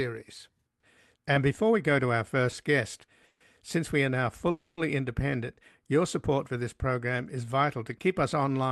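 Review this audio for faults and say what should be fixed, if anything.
Packets were likely held up in transit, draining the jitter buffer and causing two call audio freezes. At 3.26 to 3.42 s, just before "since we are now", the receiver stretched the last sound for 140 ms, and at 4.50 to 4.79 s, just after it, for 270 ms. Each freeze is a fading buzz or hiss, after which the speech resumes intact but later. A larger or more adaptive jitter buffer, together with a steadier network path, would prevent these stalls.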